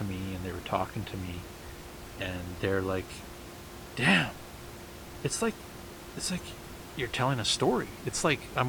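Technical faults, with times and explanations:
No technical faults are present, so there are no times or explanations to give.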